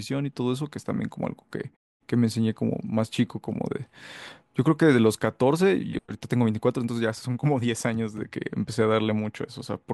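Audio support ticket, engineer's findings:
No faults found in the speech clip. Output fades to silence in the pauses between phrases and comes back in time for the next sound, with the background dropping out there and only very quiet sound lost.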